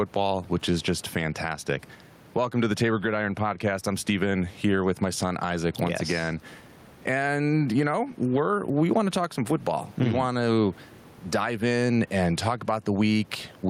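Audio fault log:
throughout, gain pumping: The input gain is likely set far too high for the microphone, so a fast limiter or compressor clamps down each time the speech gets loud, then lets go. The level swings by around 10 dB. The room noise sits about 33 dB below the speech. Loud and quiet passages are squeezed toward one flattened, breathing level.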